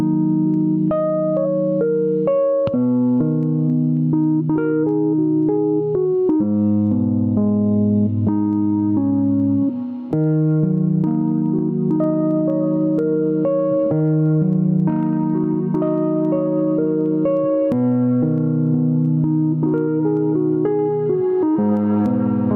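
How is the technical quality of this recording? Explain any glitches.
The recording has one audible problem, gain pumping, present throughout the clip. The level keeps being pulled down and released by around 15 dB, leaving the sound squashed. The likely cause is input gain set far too high, with a fast limiter or compressor clamping each loud moment. Unlike a noise gate, nothing cuts to silence; the level swings up and down continuously.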